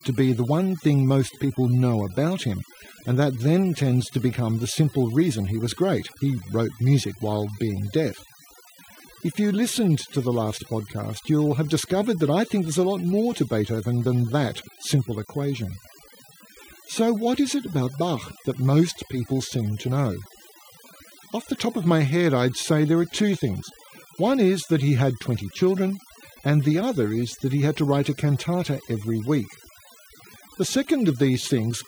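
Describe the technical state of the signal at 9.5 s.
At 9.5 s the speech carries overdone noise removal, which runs through the whole recording rather than starting or stopping there. An aggressive noise reducer is cutting individual frequency bins to near zero wherever their level sits close to its noise estimate, stripping quieter speech components along with the noise. The gaps between phrases fall to near silence flecked with twinkling specks. A spectrogram shows scattered isolated dots where the noise floor should be.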